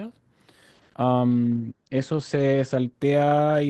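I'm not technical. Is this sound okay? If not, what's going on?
No. There is a call bitrate drop starting at 1.28 s and lasting to the end of the clip. The connection apparently judged it had less room, so the speech was squeezed into far less data. With fewer details kept, the voice turns rougher and more muffled, and the crisp upper range above roughly 8 kHz is cut away. The drop is deepest for just over a second, and quality hasn't recovered by the end.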